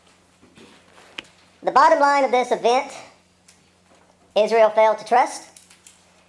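From start to finish the audio runs fast and sits high, the signature of a wrong sample rate. Everything plays 1.5 times faster and about 7 semitones higher, which fits material recorded at 16 kHz being played out at 24 kHz without conversion. Unlike a pitch shifter or a time-stretch, which change only one property, here speed and pitch rise together by the same ratio, so timing and pitch move as one.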